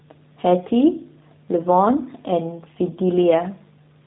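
G.729 codec coding runs throughout the speech, which sounds like an 8 kbit/s G.729A stream. Each 10 ms frame is rebuilt from a vocal tract filter, pitch predictor and a few pulses, leaving nothing above 4 kHz and a plainly audible rough, synthetic quality.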